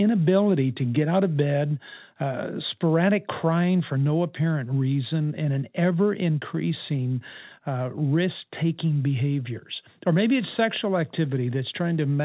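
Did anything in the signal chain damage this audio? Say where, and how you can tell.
No, nothing in the chain damaged this speech.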